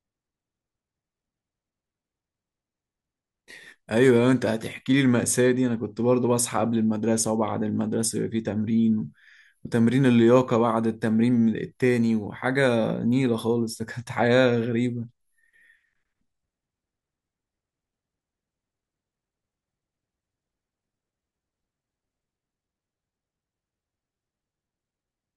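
Nothing stood out as a technical fault when listening to this speech recording.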